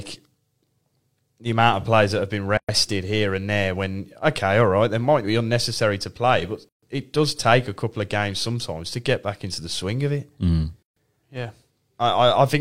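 Speech clip with three short dropouts, at 2.57 to 2.69 s, 6.69 to 6.83 s and 10.83 to 10.96 s, roughly 114 to 139 ms each and spaced 4 s apart. That's a gap at a join of encoded pieces: untrimmed encoder start delay and last-frame padding.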